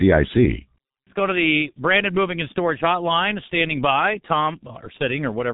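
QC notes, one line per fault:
Throughout, G.723.1 codec: speech is muffled and hoarse with smeared consonants; nothing passes above 3.8 kHz, and heavy frame-based coding fits a bitrate near 6 kbit/s.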